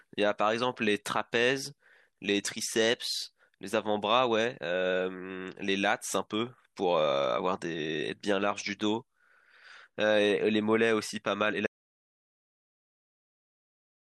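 At 11.67 s the recording suffers an audio dropout to silence, most likely because the input signal was lost, through a disconnected device, a broken link or an accidental mute, while the recorder kept writing silence. The speech stops abruptly in mid-flow and does not return; the final 2.5 s, running to the end of the clip, are complete silence with no room tone, and whatever was said there is gone.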